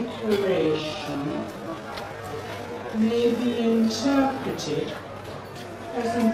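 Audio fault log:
0.00–4.42 s, time-stretched section: software likely lengthened this span to fit a target duration, playing it at 0.59 times the original speed and keeping pitch by repeating short slices, so the sound drags, before the pace snaps back at 4.42 s.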